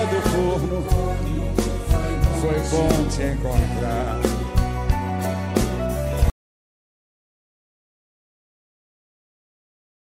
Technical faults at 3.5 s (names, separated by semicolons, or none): none